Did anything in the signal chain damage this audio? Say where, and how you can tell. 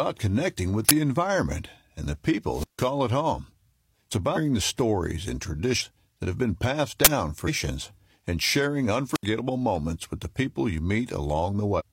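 Yes. The driver or buffer stage produced two uninitialised buffer bursts. The first comes at 0.89 s, between "connecting with" and "environment and the". The second comes at 7.05 s. Each is a loud burst of digital noise lasting about 20 ms. A block of playback memory went out before any audio was written into it. Stale values were played as samples. The length fits a playback block of about 20 ms.

The radio link into the microphone receiver caused two wireless microphone squelch dropouts. The first runs from 2.51 to 2.88 s. Hiss rises, then the sound is muted for about 150 ms before returning. The second runs from 9.13 to 9.24 s, with a mute of about 70 ms. In both, the FM signal faded. The receiver's squelch shut the output until the carrier recovered.

The codec or storage stage shows compressed frames skipped four times. They occur at 4.32 s, just before "the stories and", and at 5.76 s, between "the stories and" and "that have been passed". 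They recur at 7.43 s and 11.75 s. The speech jumps forward by roughly 300, 200, 500 and 300 ms. The gaps fit whole frames of 46.4 ms going missing.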